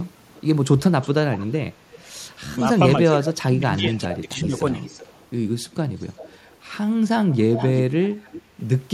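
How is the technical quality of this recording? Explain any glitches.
The recording is marred by a recurring echo and one stretch where the talker is pushed down.

Echo leak at 0.06–0.41, 1.02–1.47, 1.93–3.09, 3.75–4.19, 4.57–5.28, 5.71–6.58 and 7.3–8.42 s: a far-end loudspeaker likely fed the sound back past an incomplete echo canceller. A copy trails by about 0.36–0.39 s, starting faint and growing much stronger toward the end.

Speech suppressed in double talk from 3.14 to 4.63 s: with both sides active, the echo canceller likely couldn't separate the talker from the echo and attenuated everything. The sound dips by up to about 20 dB across that stretch.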